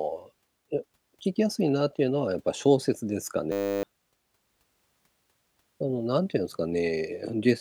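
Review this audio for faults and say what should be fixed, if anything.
A flat 100 Hz buzz replaces the speech from 3.52 to 3.83 s: a system hang loop, with one 10 ms buffer replaying while the driver stalled. To prevent it, keep the audio thread at real-time priority and have a watchdog mute output when the driver stops refilling the buffer.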